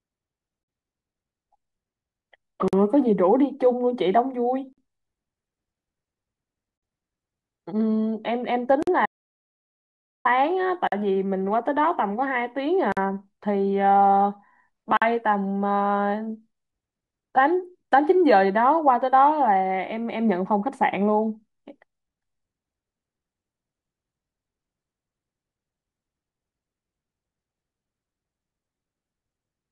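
At 0.63, 2.68, 4.73, 6.78, 8.83, 10.87, 12.92 and 14.97 s the speech breaks for 48 ms, every 2 s. These are gaps at joins of encoded pieces, where encoder delay and end padding were left in. Each shows as a thin, slightly smeared vertical blank on the spectrogram.

From 9.06 to 10.25 s, about 1.19 s, the speech cuts out completely, with no room tone. This audio dropout to silence was likely caused by lost input. The waveform is flat, and the spectrogram shows a clean empty block with hard edges.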